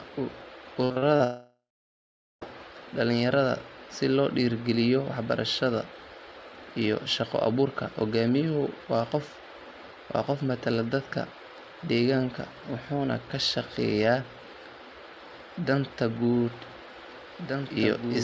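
From 0.84 to 1.22 s the audio breaks up with repeated packet loss, giving a choppy, robotic sound. Four short holes open in quick succession, the longest about 59 ms, and each is patched by stretching the last bit of sound, so nearly half of this stretch is concealment rather than real audio. On a spectrogram the harmonic lines freeze into flat, smeared blocks between gaps; the waveform shows repeated, near-identical cycles where fresh signal should be.

Immediately after, from 1.24 to 2.43 s, comes a long network dropout, with about 1.2 s of audio never played. The receiver first carries the last sound forward as a fading buzz, then gives up, leaving roughly 0.8 s of silence before the stream resumes at "dhalinyarada si loo dhiirrigeliyo". On the spectrogram this looks like a brief smeared tail dissolving into an empty band; the waveform collapses to a flat line, then the speech starts again abruptly.

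From 16.34 s to the end there is a doubled audio track. A second full-band copy of the speech runs about 2 s behind the original and about 5 dB quieter, likely from the same signal being captured again over a slower path. It starts abruptly and carries no room decay, so it sounds like overlapping talk rather than echo. On the spectrogram, patterns from two seconds earlier reappear layered over the current ones, and the waveform suddenly grows denser. Like the rest of the clip, both copies have nothing above 8 kHz, consistent with the G.722 call codec.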